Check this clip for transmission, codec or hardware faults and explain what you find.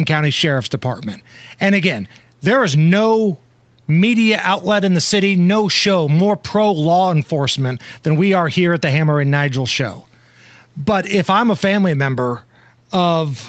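Nothing here sounds broken: the speech has come through an ordinary call chain, with the call microphone processing and the Opus-coded WebRTC call path doing their usual job, and the way the top end stops at about 8 kHz is simply the bandwidth that setup allows rather than anything going wrong.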